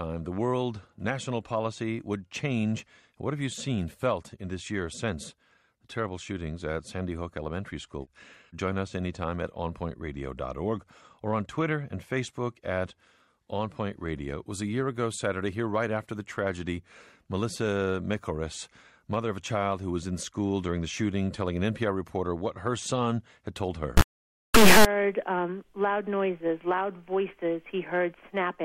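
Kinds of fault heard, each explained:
Integer read as float: 32-bit integer samples are decoded as 32-bit floats, so from 23.97 to 24.85 s the sound becomes a harsh, extremely loud buzzing square wave.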